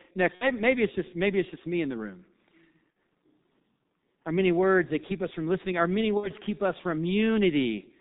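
Throughout the clip the speech carries the sound of the G.723.1 codec, heavily damaged. Nothing comes through above 4 kHz, so the voice is muffled, and the coarse, slowly updated vocal-tract model leaves it hoarse, with consonants smeared together. The heaviness of the damage fits the codec's 6.3 kbit/s mode, where each 30 ms frame is squeezed into very few bits.

Three events are VoIP packet loss concealed by the speech codec, at 0.35 to 0.47 s, 2.92 to 2.96 s and 6.17 to 6.31 s. Each gap sounds like about 60 ms of missing audio, which fits two consecutive 30 ms frames being lost. The decoder fills each gap by repeating its last pitch and filter at a falling gain, so the sound turns briefly into a buzzy tone or coloured noise and fades. The voice stays thin for a short stretch afterwards, until the decoder's state recovers.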